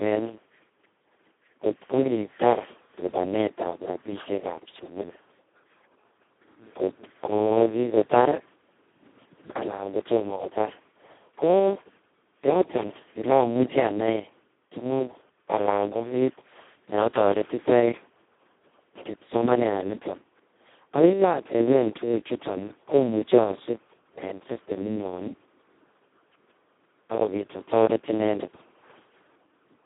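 From start to finish the speech carries heavy Speex codec damage. With so few bits for the excitation, which fits a setting near 2 kbps, the voice turns hoarse, noisy and robotic, squeezed into a narrow 200 Hz to 3.5 kHz band with nothing above 3.8 kHz.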